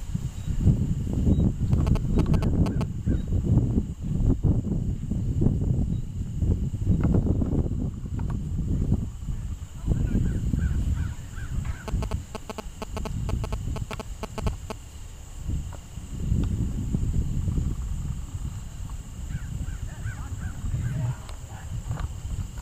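GSM signalling bursts from a nearby phone, rectified by the audio circuit, appear from 1.73 to 2.83 s and 11.88 to 14.72 s as a galloping 217 Hz tick-buzz, only slightly below the sound. They show as grouped vertical spikes on the waveform and stacked harmonic lines on the spectrogram.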